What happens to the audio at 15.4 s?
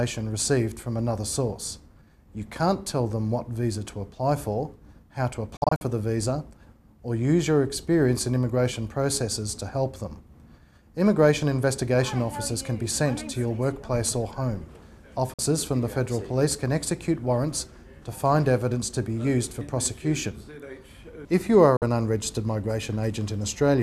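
A digital broadcast dropout mutes the audio from 15.34 to 15.39 s. The receiver stopped getting usable frames, either because the signal was lost or because frames failed their checksum, so it muted until good frames returned. The gap of roughly 50 ms points to about two lost frames. A fade of about 3 ms takes the sound down, leaving a short, clean hole, and the programme resumes further along. What was transmitted during the gap is skipped, not delayed. That separates it from a playback buffer underrun, which stalls and then carries on from where it stopped. The quick fade also keeps it from sounding like a hard click.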